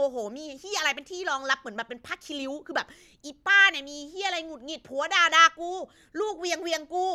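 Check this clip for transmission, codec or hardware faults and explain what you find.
No transmission, codec or hardware faults turn up anywhere in this speech recording.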